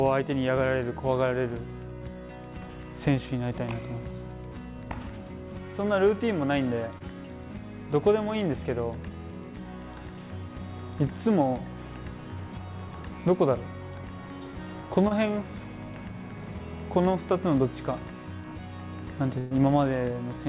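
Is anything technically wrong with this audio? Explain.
Yes, there are packet-loss faults, heard over a call path whose band stops at 4 kHz, which fits a narrowband G.711 call.

Short concealed packet loss occurs at 6.98–7.02 s and 15.08–15.13 s. Each time about 20 ms never arrived, and the receiver extended the preceding sound for roughly 22–24 ms before blending back. It is heard as a brief smear or wobble. On a spectrogram it shows as a thin, slightly smoothed vertical strip.

A burst of packet loss occurs at 19.39–19.53 s. About 120 ms went missing, and the receiver filled it by continuing and fading the last sound, so a held buzz or fading hiss replaces the lost stretch before the audio jumps ahead. On the spectrogram, the last sound's spectrum holds and dims across that span.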